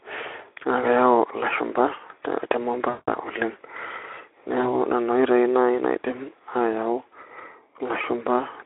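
At 2.89 to 3.09 s, then 4.61 to 4.66 s and 8.01 to 8.04 s, VoIP packet loss was concealed by the speech codec. The decoder extrapolated the last pitch and filter, so the longest gap stretches into a fading buzzy tone or coloured noise.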